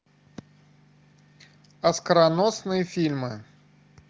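Nothing's amiss in this bit of speech, which has simply come over an AMR wideband (HD Voice) link at 23.05 kbit/s, so the usual wideband ceiling is there with nothing above about 7.4 kHz, and that's just the codec doing its normal job.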